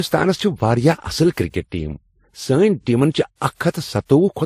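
Throughout the speech, the audio was likely transcoded between lossy codecs: it passed through several encoders in turn, consistent with a low-bitrate Vorbis and MP3 chain ending in WMA 1. Each stage's artefacts are stacked audibly together, and nothing remains above 15.2 kHz.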